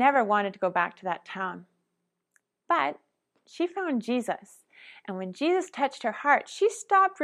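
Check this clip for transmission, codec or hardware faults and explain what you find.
Nothing here points to a transmission, codec or hardware problem; the speech comes through without any fault to report.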